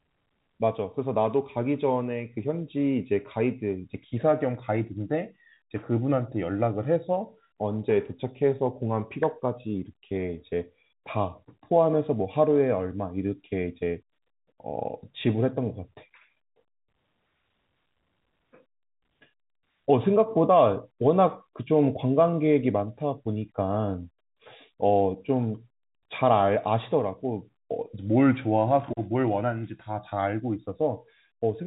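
No technical faults can be heard in this speech. It comes over a G.711 telephone channel, so the sound stops at about 3.8 kHz and has the narrow, band-limited character of a fixed-line call.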